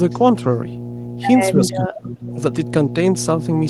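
Mains hum runs through the whole recording, a steady 60 Hz tone roughly 10 dB below the speech, leaking in from the power line. On a spectrogram it is a bright horizontal line.

From 1.55 to 2.27 s the speech dips, falling by around 25 dB at its deepest, likely speech suppressed in double talk by an echo canceller. The waveform envelope visibly collapses there.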